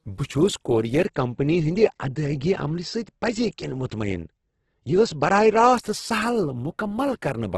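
From start to finish the speech carries heavy codec damage, likely from Opus compression. Nothing is heard above about 12.1 kHz, so the top of the sound is cut away. The encoder has too few bits for each band. It fills the gaps with noise or folded copies of lower bands. Voiced sounds turn grainy and rough instead of clean. The damage fits Opus music mode at a very low rate, around 12 kbps.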